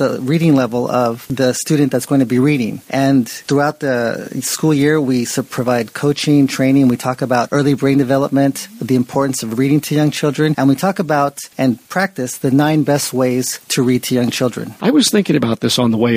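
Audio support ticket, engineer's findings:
Listened through the whole clip and nothing's wrong with the playback, so no fault to log on this one.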